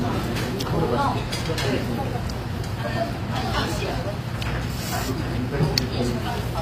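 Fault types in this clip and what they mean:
HE-AAC compression: The treble is likely rebuilt by band replication, leaving gritty, metallic high detail that fits roughly 24 kbps HE-AAC v2. On a spectrogram, upper bands look like smeared copies of lower ones, with harmonics misaligned at the crossover and nothing above 15.4 kHz.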